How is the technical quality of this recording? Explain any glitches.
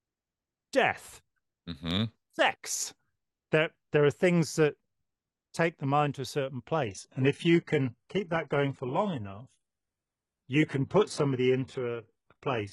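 Quality drops partway through the speech because of an adaptive stream at a lower bitrate. From 6.86 s to the end at 12.72 s, right after "mind to a certain", the stream switches abruptly and without a gap. From there the sound carries stronger codec artefacts. That fits the player stepping down from roughly 96 kbit/s AAC to a 12 kbit/s HE-AAC rendition once the connection slowed.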